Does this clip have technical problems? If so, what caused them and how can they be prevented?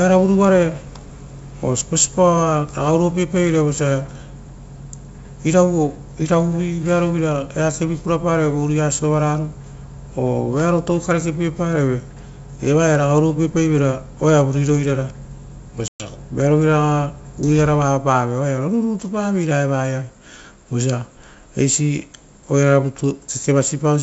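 Yes: packet loss on an ADPCM call silences about 120 ms of speech at 15.88–16.08 s. Unlike a plain dropout, the speech returns slightly distorted, because the decoder's predictor and step size briefly lose sync with the sender's. Reliable transport, or a jitter buffer with concealment and codec state reset, would prevent it.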